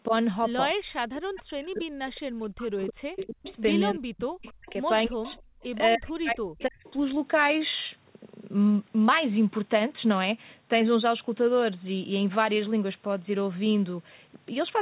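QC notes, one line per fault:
0.07–6.85 s: speech suppressed in double talk. The voice repeatedly dips, thins and breaks up, dropping by as much as about 40 dB, for around four seconds in all. This likely comes from an echo canceller that, with both ends talking, treated the near voice as echo and turned it down.
1.35–1.42 s, 3.19–5.63 s, 6.6–6.92 s: echo leak. A faint copy of the voice comes back roughly 0.3 s late, about 15 dB below the speech in the long middle stretch and about 25 dB below in the short ones. This is likely loudspeaker sound at the far end that its canceller failed to remove before sending it back.
5.55–5.62 s: background gated by the echo canceller. The room sound briefly collapses, by about 34 dB, for well under a tenth of a second, and then returns. The canceller clamped the microphone hard while the loudspeaker was active and then released it, which is heard as a brief hole in the ambience.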